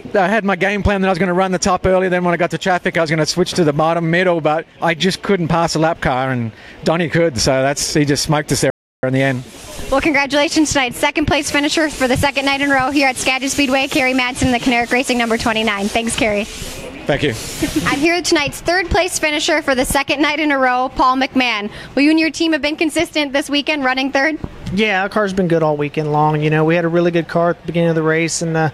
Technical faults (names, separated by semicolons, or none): playback stall